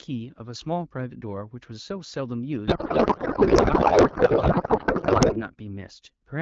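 A codec payload misread hits this speech clip from 2.67 to 5.41 s. The receiving decoder appears to be unpacking AMR wideband frames with the wrong bit layout, which fits octet-aligned payloads being read as bandwidth-efficient ones, so every field lands in the wrong place. For those 2.7 seconds the speech gives way to garbled noise and warbling tones that barely track it. Outside that span the HD Voice audio sounds clean, as expected at a rate around 12.65 kbit/s.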